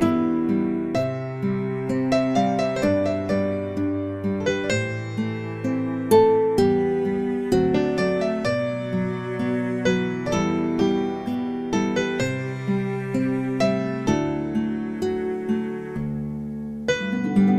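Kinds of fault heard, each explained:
Video or display buzz: interference from a screen or video cable leaking into the audio path. From 14.98 to 16.98 s a buzz at 75 Hz, the field rate of the picture, appears with fizzy hash riding above it, sitting about 35 dB below the signal. On a spectrogram this shows as a horizontal line at 75 Hz with a ladder of harmonics and a haze of broadband hash across those two seconds. The waveform shows a faint periodic ripple under the sound.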